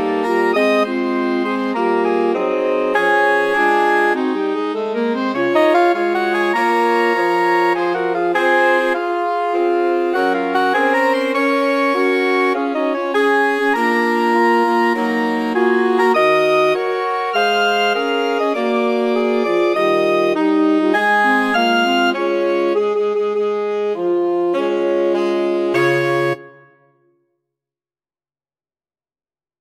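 No technical faults are audible anywhere in the audio.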